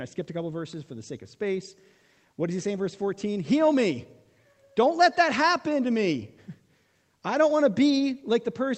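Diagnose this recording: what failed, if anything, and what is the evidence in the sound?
Nothing failed; the call path carried the speech normally.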